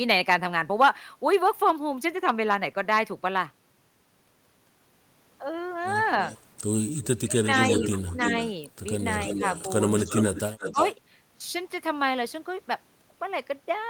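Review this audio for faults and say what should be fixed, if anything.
Echo leak occurs at 6.21–6.41 s (about 20 dB below the speech), 6.95–8.53 s (about 5 dB below) and 8.99–10.95 s (about 10 dB below). In each case a copy of the speech returns 0.32–0.34 s late. A spectrogram shows duplicate harmonic patterns offset by that delay, and the waveform shows a smeared second envelope. The likely cause is a loudspeaker-side echo canceller letting residual pickup through. Better canceller adaptation, or headset use, would prevent it.

Speech suppressed in double talk occurs at 7.19–7.54 s (deepest drop about 20 dB), 7.94–8.32 s (about 15 dB), 10.06–10.13 s (about 5 dB) and 10.72–10.78 s (about 10 dB), overlapping the echo stretches. The waveform shows sudden envelope dips, and the spectrogram shows brief bands of missing energy. These are likely the canceller ducking both talkers during overlap. 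Tuning its double-talk detection would prevent this.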